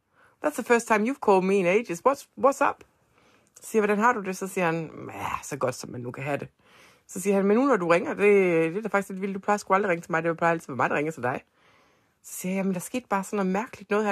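No technical faults are audible anywhere in the speech recording.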